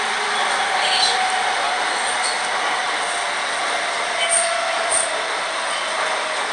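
The whole clip is hit by 4-bit ADPCM compression, and the damage is plainly audible from start to finish. Each sample is coded as a coarse 4-bit step from a predicted value, so a gritty hiss rides along with the sound and swells on its louder parts. Nothing comes through above about 10.6 kHz, which points to a reduced sample rate and fits a stream of around 89 kbps.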